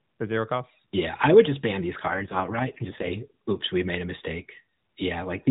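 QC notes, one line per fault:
2.08–3.15 s, AMR rate drop: after "would just ban these" the speech grows buzzy and synthetic, with no gap or bandwidth change, fitting a step from 12.2 to 4.75 kbps.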